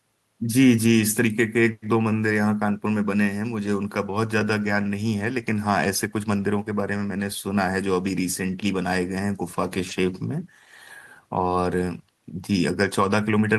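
No technical faults occur anywhere in the recording, so there is nothing to describe in time order.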